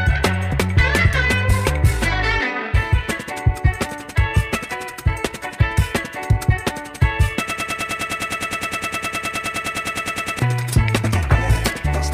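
From 7.50 s to 10.39 s the audio falls into a broken-record loop: a fragment about 103 ms long repeats exactly and back to back, roughly 28 times, giving a rapid stutter near 10 per second for almost three seconds. Whatever should have played in that span is gone, and the sound resumes afterward with that section missing. The likely cause is a stalled player, encoder or stream that kept re-sending the last buffer it held.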